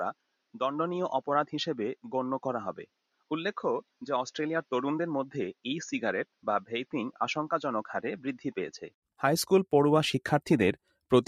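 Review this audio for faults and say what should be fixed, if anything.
Input switched to a poorer device, from 0.00 to 9.02 s: for its first nine seconds the sound is dull and band-limited, with a level roughly 5 dB lower, and a new background noise sitting roughly 30 dB under the signal. Near 9.02 s a brief gap of about 80 ms is followed by fuller, brighter sound. This pattern most likely comes from a mid-recording handover from a narrower-band input, such as a headset call profile, back to the main microphone. Prevention: lock the recording to one input device and disable automatic device switching before capture.

Sound cut by the noise suppressor, at 0.14–0.55 s, 2.86–3.31 s, 3.83–4.02 s and 6.26–6.45 s: in each window the suppressor misjudged part of the wanted sound as noise and pulled it down by about 20 to 22 dB, for around 0.4 s in the first two and around 0.2 s in the last two. 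Sustained and decaying portions sink or end abruptly. Prevention: reduce the suppressor's strength or raise its threshold so wanted steady and fading sounds are not classed as noise.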